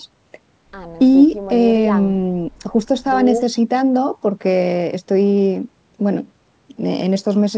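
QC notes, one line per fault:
No faults found in this speech clip. The audio stops at 8 kHz, which fits a wideband call path such as G.722.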